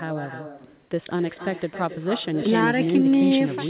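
It's a short speech clip, and the whole way through every phrase is trailed by its own echo, a fainter, thinner copy arriving roughly a third of a second later and sitting about 10 dB under the direct voice. That's classic echo with no canceller: the far end is playing the call out loud, their mic is catching it, and nothing strips it before it comes back. The top end stops around 4 kHz, which fits a narrowband G.711 call.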